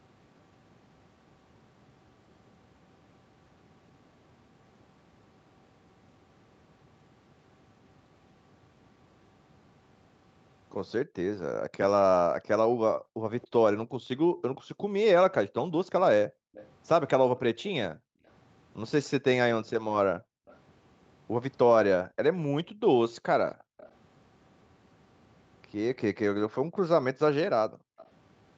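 Speech, with background gated by the echo canceller from 12.97 to 27.98 s: while the far-end loudspeaker plays, the canceller clamps the microphone, so the room sound dips, at worst by about 40 dB, for roughly three seconds in total before recovering. Echo leak appears at 13.41, 16.54, 20.47, 23.78 and 27.98 s as brief, faint delayed copies of the speech arriving about 275 to 296 ms late, roughly 25 to 30 dB down, likely residue the far side's echo canceller failed to remove and sent back.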